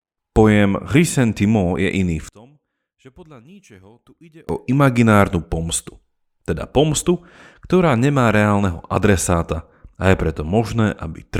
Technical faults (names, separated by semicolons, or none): one channel inverted